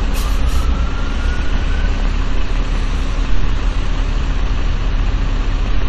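A train of clicks runs from 1.20 s to 5.83 s: about twenty similar pulses at an uneven pace averaging 3.7 per second, each peaking at roughly the level of the sound itself. The regular shape and sustained run point to an external source injecting brief spikes, likely interference from nearby equipment or a faulty connection or power supply. It is heard as irregular ticking or popping laid over the sound, and also in quieter gaps.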